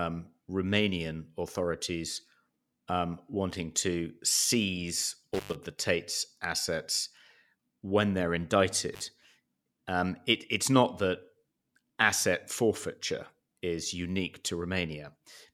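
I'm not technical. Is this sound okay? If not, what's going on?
No. The sound briefly cuts out at 5.34 to 5.55 s and 8.94 to 9.02 s, an intermittent contact: a loose cable or plug momentarily disconnecting. Crackles at each cut's edges distinguish it from a clean digital dropout.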